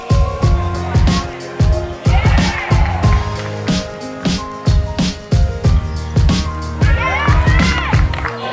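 No technical faults are audible.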